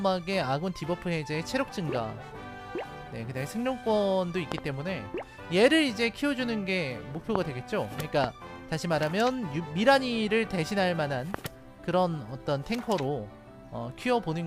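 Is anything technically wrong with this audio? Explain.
Yes, there are loud pops: a quick double pop at 4.52 to 4.60 s, then single ones at 7.35 to 7.38, 8.24 to 8.26 and 11.34 to 11.36 s. Each jumps roughly 15 to 20 dB above the sound, which carries on underneath. They're likely sudden voltage spikes from a switch, plug or static getting into the signal.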